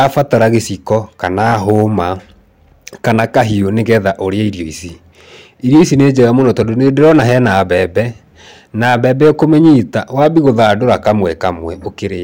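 Speech, with hard clipping throughout: peaks overdriven by about 8 dB are sheared flat, around two percent of samples, giving crackle on louder syllables. The waveform shows squared-off tops; a spectrogram shows broadband vertical streaks of harmonics reaching high frequencies at each peak.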